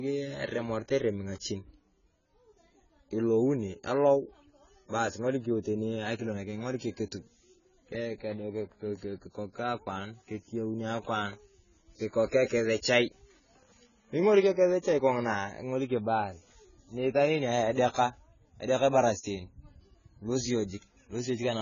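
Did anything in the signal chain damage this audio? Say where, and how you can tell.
Yes. AAC compression damage runs throughout the speech, from start to finish, at the codec stage. Nothing survives above 7 kHz, and sibilants sound smeared and fizzy. This is likely a low-rate AAC-LC encoder starving the frequency lines, which fits a bitrate around 16 kbps.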